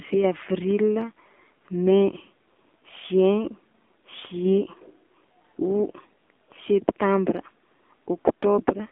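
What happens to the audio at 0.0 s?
Right from the start it's the AMR narrowband mobile codec, lasting the whole clip: speech squeezed to roughly 250 Hz–3.6 kHz and rebuilt from a vocal-tract model, so it sounds buzzy and synthetic, which fits a low rate like 7.4 kbps.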